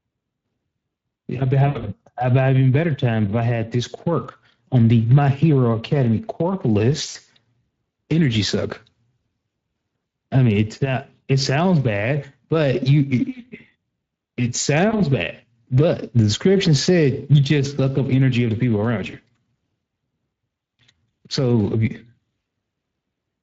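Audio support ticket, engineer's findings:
Speex codec, throughout. Plainly audible coding damage: rough, hoarse speech with a noisy edge and flattened detail. The CELP coder has too few bits to model the excitation faithfully, consistent with a setting around 20 kbps.

VoIP packet loss concealed by the speech codec, at 1.67 to 1.85 s, 7.09 to 7.17 s, 14.89 to 14.95 s and 19.11 to 19.16 s. Speech smears into a fading buzzy or noisy tone, then recovers weakly. The decoder extrapolated from its last pitch and filter, lowering the gain. The first event is worst, about 100 ms lost across 160 ms with an 80 ms run. Later gaps are about 60, 40 and 20 ms.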